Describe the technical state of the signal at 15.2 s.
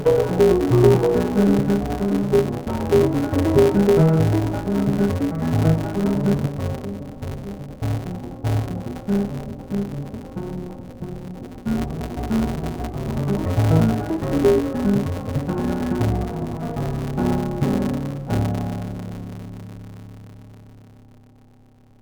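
At 15.2 s the music, like the whole clip, suffers interleaved audio read as planar: 5.8 ms blocks, fitting 256 samples, split into half-speed halves, sounding dull and robotic with a 172 Hz buzz, showing as waveform breaks every 5.8 ms and spectrogram bands at 172 Hz spacing.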